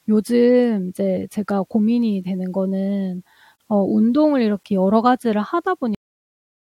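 At 3.56 s there's a gap at a join of encoded pieces: about 44 ms of silence where separately encoded chunks were stuck together untrimmed, then the speech picks up where it left off. At 5.95 s you get a cut-off end, where the last buffers never made it out, so the speech just drops straight to digital silence mid-sound with no decay.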